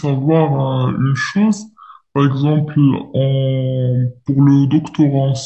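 Wrong sample rate affects the speech from start to finish. The samples are played back more slowly than they were captured, with no rate conversion, so time and pitch stretch together. The sound runs at two-thirds of its proper speed and sits about 7 semitones low, which fits audio recorded at 48 kHz being played at 32 kHz. The voice comes across deep, heavy and dragged out.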